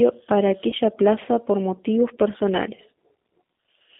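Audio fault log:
throughout G.729 codec: speech sounds rough and synthetic, confined to 200 Hz to 3.6 kHz, which fits an 8 kbit/s codec rebuilding the voice from a filter and pulses.
0.70–0.74 s VoIP packet loss concealed by the speech codec: a short fading smear as the decoder extends its last pitch and filter over 20 ms of lost audio.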